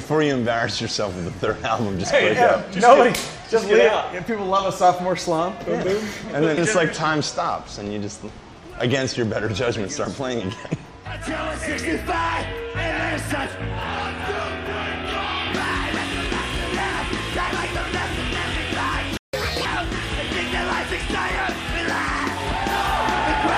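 A playback stall hits at 19.17 s: the sound cuts out mid-flow and stays silent for about 160 ms, resuming at 19.34 s. The likely cause is the player running dry of buffered data, or its output thread being held up, so nothing reached the output.

Catch-up at higher speed follows from 19.34 to 19.65 s. The player drains the backlog by resampling at 1.5 times normal rate, so tempo and pitch jump together, roughly seven semitones higher, before snapping back to normal speed.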